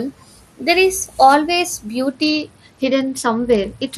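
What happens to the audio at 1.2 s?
Nothing goes wrong at 1.2 s; the speech carries on intact there, with no dropout, click or other fault.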